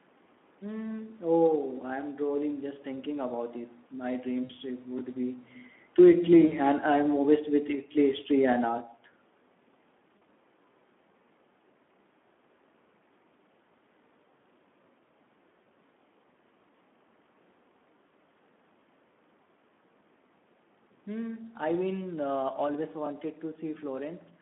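The Speex codec is present throughout. The sound is confined to roughly 200 Hz to 3.5 kHz, and the narrowband CELP coding, which points to a rate near 11 kbps, leaves too few bits for the excitation. The result is a plainly audible hoarse, noisy graininess.

VoIP packet loss concealed by the speech codec first occurs from 4.43 to 4.53 s. About 60 ms of audio is missing, and the decoder fills the gap by extending its last pitch and filter at falling gain. The sound smears into a buzzy tone or coloured noise that fades, and it stays weak for a moment after the stream returns.

Automatic gain falling runs from 5.84 to 8.81 s. The gain control lowered its gain gradually, by about 4 dB. The sound and its room background sink together across those three seconds.

Within that stretch, at 6.45 to 6.53 s, another concealed packet loss covers about 60 ms with the same decaying extrapolation.

Two shorter concealed losses follow, both with the same stretched, fading quality. 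One runs from 10.17 to 10.23 s and lasts about 40 ms. The other, from 15.63 to 15.68 s, lasts about 20 ms. Together the losses fit 20 ms codec frames.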